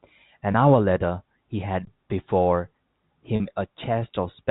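At 0.52 s the speech hits packet loss with pitch repetition. About 20 ms of audio went missing, and the receiver covered it by looping the last pitch cycle, so you get a brief held, slightly buzzy smear running to 0.54 s. The same thing happens again from 3.36 to 3.40 s, this time over a 40 ms gap. That one is twice as long, so the repeated cycle drones on for longer before the real speech cross-fades back in.

In between, from 1.85 to 1.87 s, there's an underrun with held sample. The output buffer ran dry for about 21 ms, which fits a 1024-sample block, and the converter just froze on its last value. The sound drops out flat rather than popping. Roughly 20 ms of live audio was skipped meanwhile, so the waveform doesn't line up when it resumes. The G.711 telephone band shows as the usual 4 kHz ceiling.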